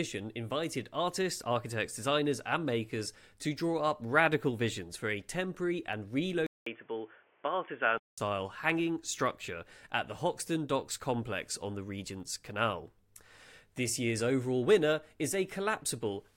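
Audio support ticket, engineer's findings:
Dropped buffer (overrun) at 5.93 s, just after "visions for a temporary". Jump forward in the sound, no gap; roughly 10 ms of audio missing. Likely a capture-side overrun: the application did not read the input buffer before the hardware overwrote it, so the audio on either side of the lost block is butted together.

Input switched to a poorer device, 6.47 to 8.18 s, ending just before "hanging structure at the". About 200 ms of silence at the switch, then band-limited, boxy sound with a new noise floor about 35 dB below signal. Level is unchanged. The likely cause is the input route changing mid-capture to a narrowband device, which fits a headset call profile, then switching back.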